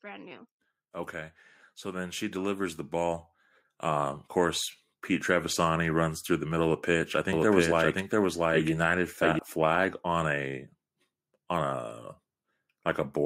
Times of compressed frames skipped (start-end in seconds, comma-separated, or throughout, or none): none